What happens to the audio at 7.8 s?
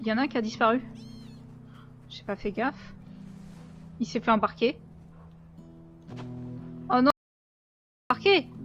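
At 7.8 s the audio sits inside an audio dropout to silence, from 7.10 to 8.10 s: a full second of silence with no room tone, likely from a lost input link.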